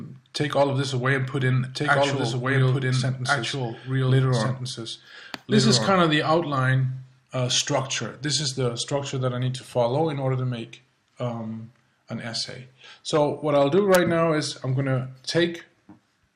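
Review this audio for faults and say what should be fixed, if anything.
A doubled audio track runs from 1.41 s to 5.97 s. The likely cause is either a second, slower capture path feeding the same signal into the mix, or an edit that left two copies of the material out of step. The result is a full-band duplicate trailing the original by about a second and a half at roughly equal level, with no decay or room colour, starting and stopping abruptly. To prevent it, route each source through only one capture path and check edits for overlapping duplicate regions before mixdown.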